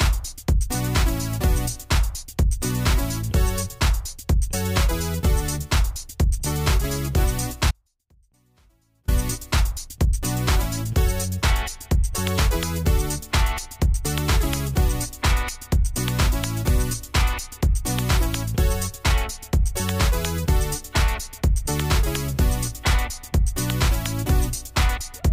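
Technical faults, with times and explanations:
7.71 to 9.08 s: audio dropout to a faint residue. The sound cuts out abruptly for 1.37 s, then returns just as suddenly. Only a faint leak remains, roughly 40 dB down. The signal was likely lost upstream while the later path stayed live.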